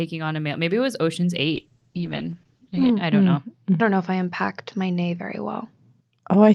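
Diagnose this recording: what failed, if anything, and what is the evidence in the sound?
From 1.56 s to the end, the speech turns rough and muffled, with a watery smear and the top end gone: audible bandwidth collapses from about 20 kHz to about 8 kHz, and the coarsest stretch lasts roughly 1.35 s. This is a call bitrate drop at the codec stage. The call's bandwidth estimate fell, so the encoder was throttled, and the sound points to a drop from around 40 kbps to about 8 kbps. At that rate Opus quantises coarsely and discards high frequencies.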